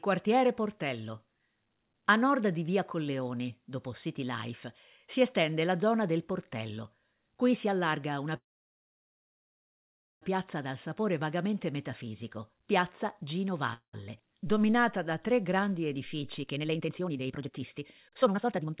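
At 8.36 s the speech stops for about 1.85 s, until 10.23 s, in a call audio freeze. Packets were likely delayed, and the receiver ran out of audio. A brief fading tail gives way to about 1.8 s of flat silence on the waveform. A shorter freeze follows from 13.74 s to 13.95 s, about 0.2 s, with a short smear and then roughly 90 ms of blank. In both, the speech resumes where it stopped, so nothing is lost but delay is added.

From 15.95 s to the end, a jitter buffer speed-up plays the speech at about 153% speed, removing roughly one and a half seconds as many small pitch-period cuts. It sounds rushed but keeps its pitch. The spectrogram shows harmonic spacing unchanged while syllables crowd together, all under the 4 kHz ceiling of the narrowband call path.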